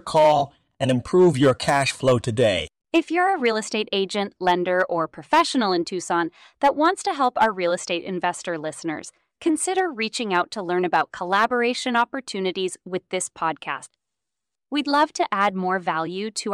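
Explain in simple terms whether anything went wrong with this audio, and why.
Hard clipping runs through the whole recording. The speech was recorded louder than some stage in the chain could handle, so the tallest peaks of the waveform were sliced off flat instead of rounding over. Only a small fraction of the sound is affected, since just the loudest moments cross the limit. Those flattened tops create extra high-pitched components that were never in the original, heard as a brief crackle or roughness whenever the speech gets loud.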